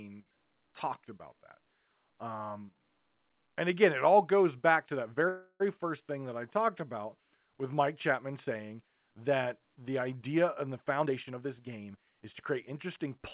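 At 5.28 s, just after "goes back to that", a call audio freeze lasts about 0.34 s: the last sound is stretched into a fading buzz that ends in about 50 ms of silence. Speech then resumes where it stopped. That distinguishes it from a dropout, because nothing is skipped. It was likely caused by delayed packets emptying the jitter buffer.

From 10.84 s to 13.07 s, after "the idea and the", a jitter buffer speed-up makes the speech sound hurried at about 115% of normal rate. Roughly 0.3 s is trimmed away in many pitch-period-sized cuts. The pitch stays unchanged, which separates this from a resampling error. Throughout, nothing is heard above 4 kHz, which fits a narrowband call codec such as G.711.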